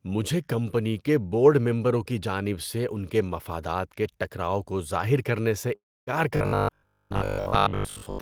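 Speech clip with two faults late in the recording. From 5.75 to 6.10 s there is a long network dropout. The last sound before the gap is stretched into a fading buzz that decays to silence, and when the speech resumes about 0.32 s of it is simply missing. That pattern is most likely a run of packets that never arrived, with the receiver's concealment filling the hole until it gave up. From 6.37 s to the end at 8.21 s the voice takes on a rigid, metallic buzz with a fixed pitch of 50 Hz. The speech still follows its rough contour underneath. This is the robotic sound from repeated short buffers: audio arrives too seldom, so the playback loops the last chunk. The 50 Hz pitch fits a repeat length of 20 ms. Repetition fills roughly two thirds or more of that stretch, and the real audio behind it is skipped. The likely cause is starved or late delivery to the output buffer.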